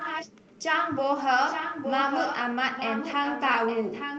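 Echo leak runs from 0.00 to 0.52 s, again from 1.49 to 2.41 s, and from 2.75 s to the end. A copy of the speech returns about 0.87 s late, a little below the direct speech and fainter in the last stretch. This is likely a far-end loudspeaker feeding its microphone, with that echo canceller letting part through. The call's microphone path, with nothing above 8 kHz, sounds normal.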